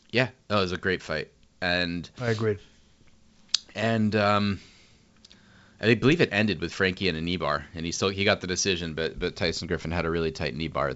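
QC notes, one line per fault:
Nothing to flag on this one, just speech over G.722 wideband telephone coding at 64 kbit/s, with the content stopping at about 7.7 kHz as you'd expect from that path.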